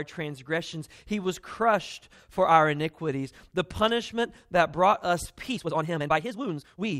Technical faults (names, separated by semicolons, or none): time-stretched section